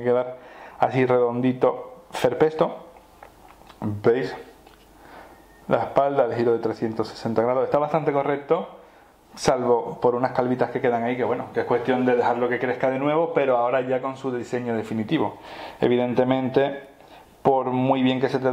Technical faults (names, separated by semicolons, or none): none